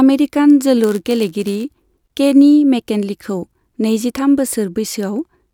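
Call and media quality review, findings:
Block size mismatch (padded), 0.83–1.63 s, ending just before "केनी मेकिन्लेखौ": steady buzz near 100 Hz from the zero-filled tail of each short-written block. Speech slowed very slightly (0.996x) with timbre kept, unlike a resampling fault. Suspect the buffer handoff between stages.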